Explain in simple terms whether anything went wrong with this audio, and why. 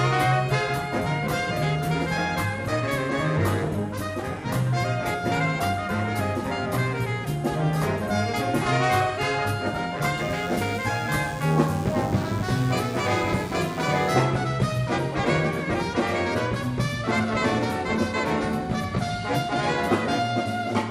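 From 10.17 to 14.11 s, a faint, thin buzz appears. It's DECT cordless phone buzz: nearby phone radio pulses, 100 per second, leak in.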